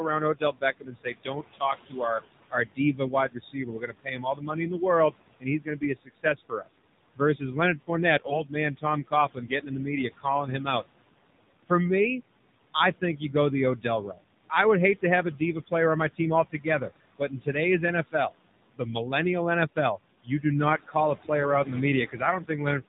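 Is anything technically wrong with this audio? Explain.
Yes. The speech has two problems running through the whole clip and two kinds of events at specific times. The room noise, about 15 dB below the speech, is part of the recording and not a fault.

Noise suppressor artifacts are present from start to finish. A suppressor estimates the steady background and pulls down each frequency band it judges to be noise, frame by frame, here by about 20 dB. The background drops away in pauses and comes back up under the speech, so it seems to pump with the talker. On a spectrogram the noise floor is dark between phrases but lighter and patchy behind the speech, with scattered isolated time-frequency specks.

The AMR narrowband mobile codec also affects the entire clip, and its damage is clearly audible. AMR-NB models the vocal tract and excites that model with a pitch predictor and a few pulses per short subframe. 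At a low rate, which fits a mode around 7.4 kbps, the speech sounds buzzy and synthetic, and the background turns into a swirling texture. On a spectrogram everything above 4 kHz is empty, with a sharp ceiling across the whole clip.

Speech cut by the noise suppressor happens in four stretches. The first runs from 0.34 to 10.84 s and covers roughly four seconds in total, with the deepest dip about 21 dB. The second runs from 12.74 to 17.55 s, roughly 0.7 s in total, dipping about 19 dB. The third runs from 18.11 to 19.13 s, only about 0.15 s in total, dipping about 20 dB. The fourth runs from 19.76 to 22.82 s, about half a second in total, dipping about 20 dB. In each case the suppressor mistook soft speech for noise. Consonants and word endings sound swallowed. The waveform shows sudden notches in the envelope, and the spectrogram shows speech energy abruptly fading.

AMR bit errors occur from 8.24 to 8.43 s. 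On a weak link, the less protected bits in a run of frames arrived corrupted while the checks on the essential bits still passed. The span fits about eight frames. Excitation pulses land in the wrong places, and the gain and spectral details go astray. The speech roughly keeps its pitch and level but turns hoarse and gargly. A spectrogram shows smeared, noisy harmonics over that fifth of a second.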